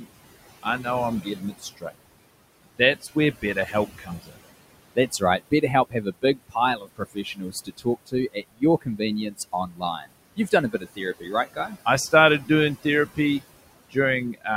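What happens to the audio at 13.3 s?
At 13.3 s there is speech cut by the noise suppressor, within the span from 12.11 to 13.42 s. The suppressor mistakes soft parts of the speech for background noise and turns them down by up to about 17 dB, around a fifth of a second in all, so quiet consonants and word endings sound swallowed or faint.

Noise suppressor artifacts are also present there, as they are throughout the clip. The suppressor pulls the steady room noise down by about 20 dB frame by frame, so the leftover noise sinks and swells with the speech, and the voice can take on a thin, watery quality.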